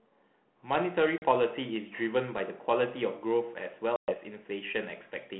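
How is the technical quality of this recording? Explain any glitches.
The recording has two short glitches, both packet loss on an ADPCM call, over telephone-band audio (roughly 150 Hz to 3.4 kHz) with light ADPCM grain that fits a 32 kbit/s G.726 link.

From 1.18 to 1.24 s about 40 ms of sound drops to hard-edged silence, which points to a couple of lost packets. A longer hole of about 120 ms runs from 3.96 to 4.15 s, suggesting around seven. The decoder's adaptive predictor and step size drift away from the sender's during each gap. When the speech returns, it comes back slightly distorted, and then settles over some tens of milliseconds. That recovery is what sets this apart from a simple dropout or muting, where the audio resumes cleanly.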